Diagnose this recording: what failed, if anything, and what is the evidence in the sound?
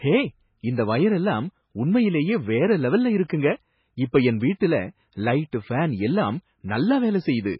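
The codec stage failed, with heavy MP3 compression the likely cause. The speech has nothing above 5.5 kHz and a watery, swirling texture throughout, which fits a very low bitrate near 16 kbps. Starved of bits, the encoder cut the treble and let weak frequency lines flicker between frames.

Pre-echo, also from the codec, appears at 3.28 s and 4.60 s as a brief hiss smeared about 15 ms and 12 ms ahead of sharp attacks. Each attack sat late in a transform block, so quantisation noise sized for it spread into the quiet moment before.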